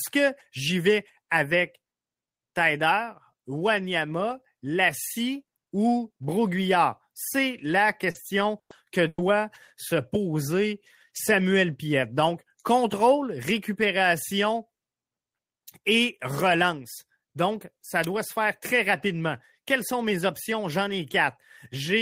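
At 8.11 to 8.18 s a short concealed packet loss smears the speech for about 40 ms. The receiver extends the preceding sound to cover the hole. Unlike the later bursts, it is a brief wobble rather than a held tone, though about 40 ms of the speech is lost.

At 8.15, 8.70 and 9.18 s a lost packet rebuilt from error correction gives roughly 20 ms that sound rougher and noisier. The following packet carried a coarse copy, so there is no gap, only a patch of degraded texture.

At 8.59 to 8.73 s and 9.08 to 9.21 s a burst of packet loss removes about 100 ms each time. Concealment stretches the last sound into a fading buzz or hiss before it drops to silence, for about 100 ms in the first burst and 30 ms in the second. Speech then resumes further on, with the middle missing. The length and the dead air set these apart from the short loss.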